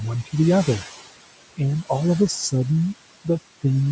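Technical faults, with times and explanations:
Throughout, noise suppressor artifacts: the suppressor treats the steady room noise, which sits about 15 dB below the speech, as something to remove and pulls those bands down by about 18 dB, deciding frame by frame. So the background drops away in the pauses and comes back up under the speech, which gives a pumping effect where the noise floor keeps moving with the talking. The cutoff at 8 kHz comes from the call microphone chain.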